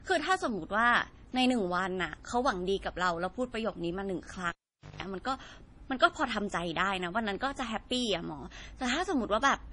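From start to finish the speech sounds dull and watery, with nothing at all above 10.5 kHz. On a spectrogram that shows as a hard, flat ceiling across the whole clip, with smeared, blotchy detail below it. The likely cause is low-bitrate audio saved at a high bitrate: the pattern fits a 32 kbit/s MP3 later re-encoded at 320 kbit/s. The larger file keeps the damage from the first encoding and cannot bring back what it removed.

At 4.49 s a cable pulled and plugged in interrupts the sound. A sharp pop cuts the speech, then the signal drops to near silence for about 0.48 s. A coarse 50 Hz mains buzz lasting about 0.17 s follows while only the plug tip makes contact, and a second pop at 5.03 s brings the speech back. The waveform shows two spikes bracketing a flat gap with a dense hum section inside it. The spectrogram shows vertical broadband lines at both pops and a stack of 50 Hz harmonics during the buzz.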